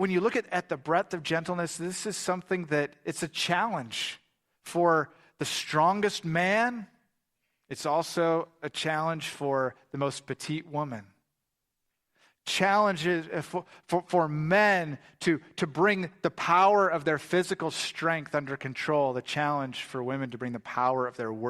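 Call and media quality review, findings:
No audible faults found in this speech recording.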